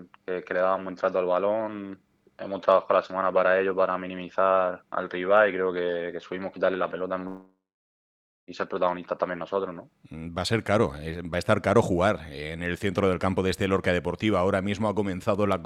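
At 7.27 s the sound breaks off and, until 8.50 s, the receiver fills the gap. It first stretches the last sound into a buzz that fades, then leaves about 0.9 s of silence. This is a long network dropout, likely from audio that stopped arriving. A brief packet-loss glitch would be patched almost seamlessly. Here the concealment runs out, and the sound resumes further on with about 1.2 s lost rather than delayed.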